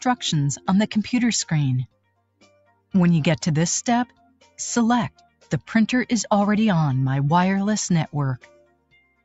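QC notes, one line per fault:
Throughout: noise suppressor applied to music or sounds. A speech-tuned suppressor stayed on and treats steady tones, ambience and reverb as noise. Level swings by roughly 15 dB as it reacts. Attacks pass, held parts and tails sink, so the sound pumps, flutters or thins.
1.87-2.94 s, 4.07-4.58 s, 5.10-5.51 s, 8.38 s to end: sound cut by the noise suppressor. Here it judged the sound to be noise and pulled it down further. Deepest drops are about 22, 20, 21 and 22 dB. Steady or fading parts sink or lose their decay.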